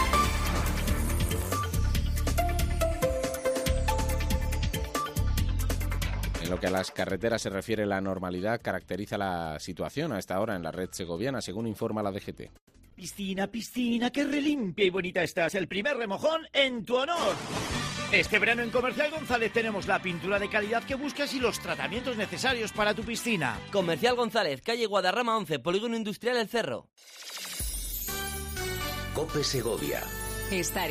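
From 12.57 to 13.01 s, repeated packet loss (robotic sound) leaves four gaps, the longest 170 ms. About 200 ms is patched by extending earlier sound and 60 ms is simply missing, so the stretch sounds choppy and robotic. The waveform shows smeared, repetitive blocks and breaks. On a spectrogram these appear as flat, stretched patches.

A call bitrate drop runs from 13.37 to 22.09 s, falling from 128 to 15 kbps and staying at its lowest for 5.29 s. The coarser coding sounds rough, watery or muffled. The spectrogram loses its upper band until the quality returns near 22.09 s.

Within that stretch, a jitter buffer speed-up from 15.36 to 17.44 s trims around 150 ms of pitch periods. The audio plays at 106% speed with unchanged pitch and sounds hurried, with whole repeating cycles cut out of the waveform.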